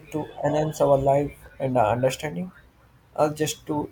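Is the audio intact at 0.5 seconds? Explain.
No. At 0.5 s a steady, raspy buzz sits under the speech, well below it at roughly 30 dB down. This is mains buzz, present from the start of the clip until 1.5 s. Its 50 Hz mains origin shows in sharp switching spikes arriving twice per cycle, a hundred times a second. Those spikes are rich in harmonics of 50 Hz that extend up to several kHz, giving the buzz its harsh edge.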